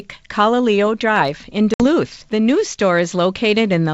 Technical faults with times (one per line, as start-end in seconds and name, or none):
1.74-1.84 packet loss on an ADPCM call